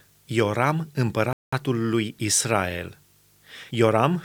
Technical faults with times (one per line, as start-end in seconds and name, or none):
1.33-1.53 Bluetooth stall